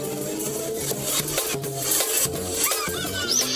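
Throughout the clip the audio runs at double speed and sits a full octave, 12 semitones, above where it belongs, with pitch and tempo raised together. That pairing is the signature of a wrong sample rate: the samples are played back faster than they were captured, with no conversion between the two rates. The exact 2.0 ratio fits material recorded at 16 kHz and played out at 32 kHz.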